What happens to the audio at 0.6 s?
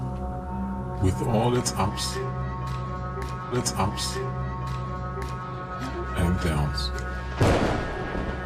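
Nothing goes wrong at 0.6 s; the audio carries through that moment intact, with no dropout, click, distortion or other fault to be heard.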